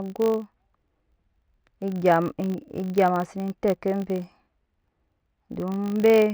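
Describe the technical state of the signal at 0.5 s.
At 0.5 s you're hearing the filter restarted on every block, and it isn't a passing glitch: it runs through the whole speech clip. Each block starts the filter from silence instead of carrying over its state, so every boundary kicks off a small transient. Those come 50 times a second, which points to blocks about 20 ms long, and together they make a 50 Hz buzz that rises and falls with the level of the speech.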